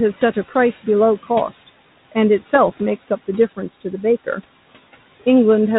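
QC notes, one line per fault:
Throughout, noise suppressor artifacts: the background is pulled down by about 16 dB between phrases and swells back under the speech. A spectrogram shows the noise floor dipping in the gaps.
2.68–2.82 s and 4.33–4.47 s, bit errors on an ADPCM link: flipped bits at a low error rate knock the decoder's step size and prediction off track, so each hit rings on briefly as rough pops and level jumps, heavier in the first burst. The waveform shows spiky, uneven envelopes, and the spectrogram shows broadband vertical smears.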